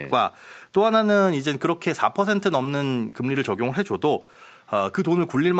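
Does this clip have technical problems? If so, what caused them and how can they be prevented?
Yes. Between 2.63 and 5.37 s the speech has brief ticks and smeared hiccups: scattered short gaps, about four packets lost or late, each patched by extending the preceding sound. A steadier network path and a larger jitter buffer would prevent it.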